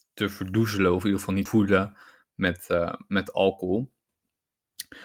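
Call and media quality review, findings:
Abrupt jump forward right after "in ieder geval niet" at 1.45 s, no gap: skip ahead, roughly 0.4 s of speech dropped, probably by an overflowing jitter buffer, with sides spliced directly.

Speech hurried but same pitch, 2.24–2.74 s, running at 109% speed: jitter buffer speed-up, receiver trimming short pitch-period pieces, around 50 ms total, to drain excess buffered delay.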